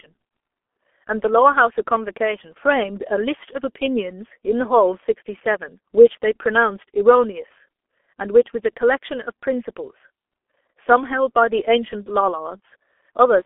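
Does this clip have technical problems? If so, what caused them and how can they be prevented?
Yes: the whole clip went through the G.723.1 codec, which fits a roughly 6 kbit/s stream. Nothing above 3.6 kHz remains, so the speech sounds muffled, hoarse and smeared on consonants. Route calls through a wideband codec such as Opus instead.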